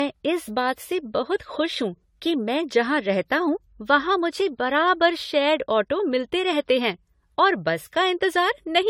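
Throughout, the speech sounds swirly, hollow and smeared, with blurred attacks: generation loss, likely from about five successive lossy passes, consistent with AAC-LC near 64 kbit/s.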